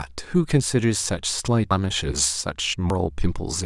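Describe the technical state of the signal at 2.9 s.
At 2.90 s the speech jumps forward, with no gap of silence, as if something like 150 ms went missing. That's the signature of a dropped buffer (overrun): most likely the samples weren't collected before the hardware overwrote them, so the two sides got spliced together.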